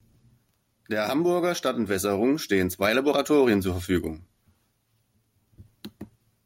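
From 0.72 to 4.17 s, automatic gain rising: the gain control judged the input too quiet and lifted it about 7 dB, so speech and background swell together.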